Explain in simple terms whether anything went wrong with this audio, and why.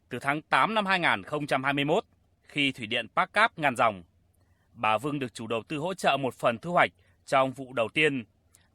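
Nothing went wrong here: the speech comes through steady and unbroken, with no moment where anything trips it up.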